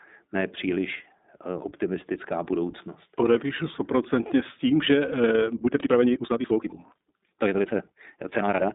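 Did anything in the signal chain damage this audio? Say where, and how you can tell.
Yes. At the codec stage, iLBC runs throughout: nothing above 3.8 kHz, a 200 Hz to 3.7 kHz line band, and rough, synthetic texture from independently coded 20 ms frames. Plain band-limiting wouldn't add that roughness.

From 5.49 s to 8.74 s, after "stoprocentně s tím že", the audio rushes about 1.83 times faster yet keeps its pitch. That points to a time-stretched section, likely from playback or editing software dropping short pieces. A resampling speed-up would raise the pitch.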